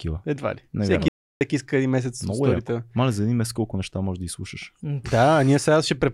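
The input feed to the recorder was likely interrupted for a moment, through a lost connection or a brief mute, while the recording carried on writing silence. The result is an audio dropout to silence from 1.08 to 1.41 s: the speech cuts off abruptly and about 0.33 s of it is missing. The gap holds silence with no room tone, and the speech resumes sharply on "иска един".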